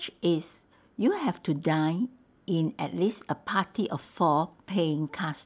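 No technical faults are audible anywhere in the speech recording.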